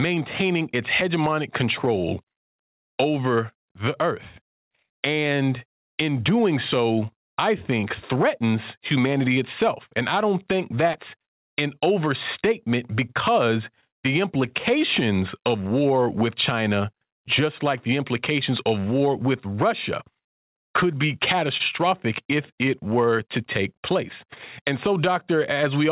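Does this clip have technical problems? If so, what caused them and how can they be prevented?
Yes. At 10.93 to 10.96 s there is short concealed packet loss. About 20 ms of audio never arrived. The receiver continued the previous sound over the gap, leaving a brief smear. Forward error correction or a more reliable network connection would prevent it.

At 21.57 to 21.62 s there is a short stall from a late packet. The jitter buffer ran empty, so a sound is held 25 ms too long. Nothing is lost. A larger or adaptive jitter buffer would prevent it.

Throughout, nothing is heard above 4 kHz, which fits a narrowband G.711 call path.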